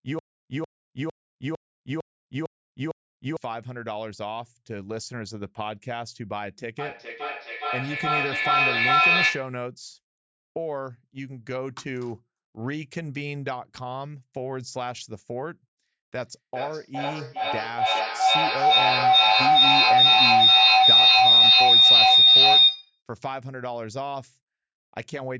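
From 6.79 to 9.63 s there is feedback echo between two devices. A second device replays the sound, the first device's microphone picks it up again, and each copy returns about every 0.4 s, piling up to about 11 dB above the speech. The waveform shows evenly spaced, stacked repeats.

From 16.2 to 23.02 s the loop gains level on every trip and becomes a feedback howl. This is a ringing tone near 4 kHz, with a loop delay of roughly 0.4 s, peaking about 16 dB above the speech. On a spectrogram it is a bright horizontal band, below the call audio's 8 kHz ceiling.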